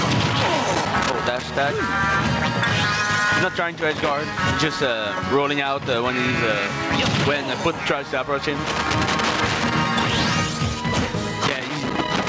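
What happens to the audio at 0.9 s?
At 0.9 s there is loose connector crackle, running from 0.71 to 1.43 s. A worn or dirty contact is making and breaking as it shifts. That chops the signal into an irregular burst of scratchy crackle.

Gain pumping is also present at that moment, as it is across the whole clip. The gain swings roughly 15 dB, pulling loud and soft parts closer in level. The likely cause is gain set far too high, with a fast limiter pulling it down.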